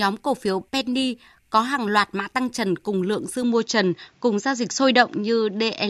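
At 3.43 s, after "trần cùng lượng dư", the speech abruptly dulls, with nothing above 7.4 kHz and faint new background noise: likely the input switched to a poorer device.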